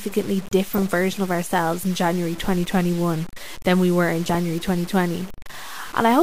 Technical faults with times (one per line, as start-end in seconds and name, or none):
0.00-6.23 low bit depth without dither
0.73-0.86 DAB burbling
4.25-4.35 DAB burbling